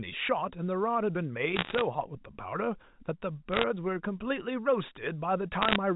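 Bit errors on a digital phone line cause bursts of crackle at 1.56 to 1.81 s, 3.52 to 3.64 s and 5.62 to 5.76 s. Roughly one bit in a hundred is flipped in the first and last bursts, and about 0.7 in a hundred in the middle one. Each flip corrupts one sample, and a flip in a high bit or in the sign of a loud sample produces a sharp tick over the G.711 speech.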